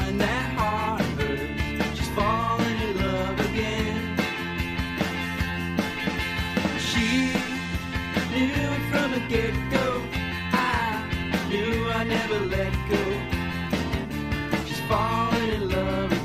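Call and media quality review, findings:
Nothing to flag here; listened through the whole thing and found no audible faults to log.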